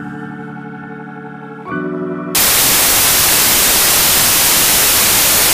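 The audio plays cleanly up to 2.35 s, then turns into loud, hard broadband noise that continues to the end of the clip. The cause is samples built from the wrong bytes: from that point the reader assembles each sample with its bytes misaligned or in swapped order, so the rapidly fluctuating low bits take over as the dominant part of every value. Unlike ordinary hiss or a noise burst laid over the sound, this noise replaces the audio entirely.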